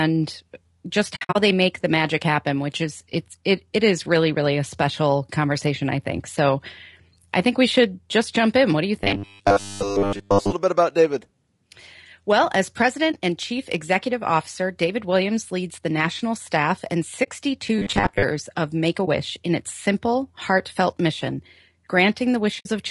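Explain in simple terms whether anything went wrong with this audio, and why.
The speech sounds rough and grainy the whole way through, with a thin, artificial-sounding top end. That is likely low-delay AAC compression, the kind used in video calls. Its very short chunks capture voice poorly when data is tight.

The sound also drops out softly several times: from 1.15 to 1.36 s in a few short gaps, at 13.12 to 13.14 s, 17.23 to 17.28 s, 19.05 to 19.08 s and 22.60 to 22.67 s. This is AAC frame loss with muting. Pieces of data went missing, and the player faded them to silence rather than clicking.

From 9.04 to 10.53 s, and again from 17.79 to 18.24 s, the voice turns into a stiff, metallic buzz around 100 Hz. This is robotic sound from repeated short buffers. The likely cause is a player short of fresh audio that kept looping its last tiny slice, about 10 ms long.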